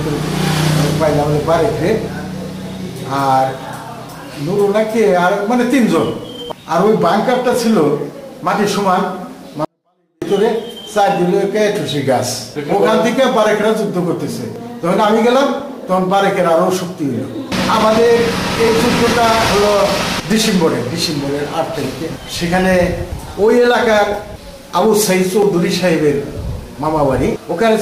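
Between 9.65 and 10.22 s the audio suddenly falls about 48 dB and becomes nearly inaudible, a 24-bit alignment error: 24-bit samples sitting in the low bytes of 32-bit words were read as full 32-bit integers. Unlike a dropout, the sound never stops and stays clean, just instantly far quieter.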